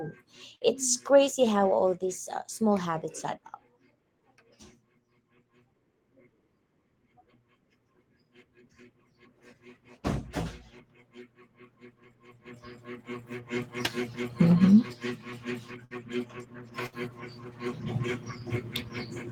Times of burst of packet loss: 0.55-0.64, 15.85-15.93, 16.86-16.95

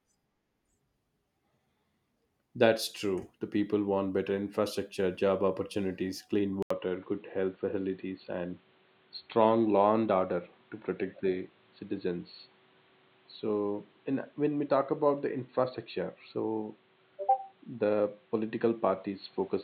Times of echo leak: none

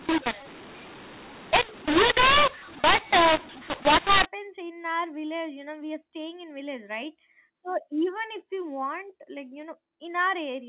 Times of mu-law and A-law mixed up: 0.00-4.26

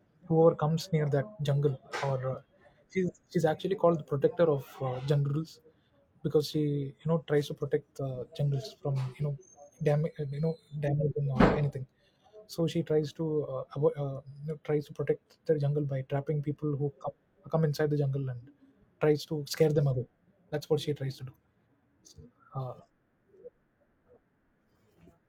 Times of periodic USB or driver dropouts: none

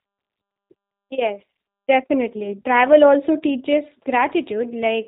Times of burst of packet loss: none

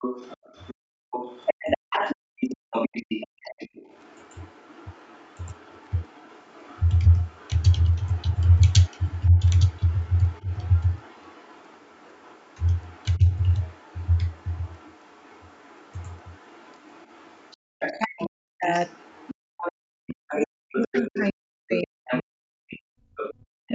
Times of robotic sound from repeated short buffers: none

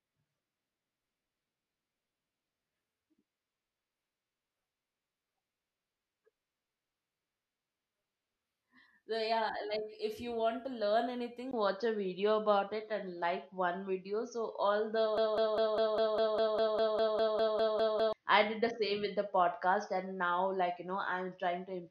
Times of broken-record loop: 15.18-18.13

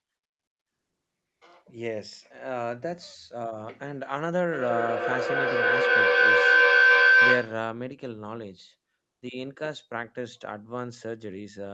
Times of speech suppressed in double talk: none

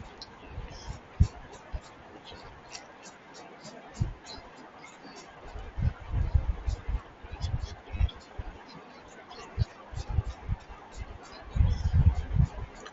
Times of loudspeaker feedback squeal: none

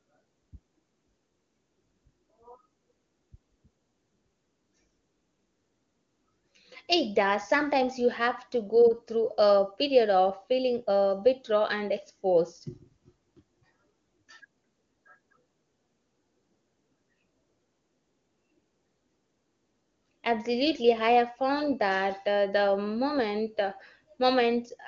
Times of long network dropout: none

